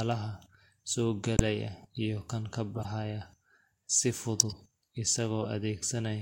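Speech with corrupt frame decoded faults at 1.37–1.40 s, after "iyo kan" at 2.75–2.92 s, at 4.40–4.54 s, and at 5.42–5.46 s. Damaged compressed frames were decoded anyway, putting energy at the wrong frequencies. Each is a short chirp or noise burst. The first and third are loud.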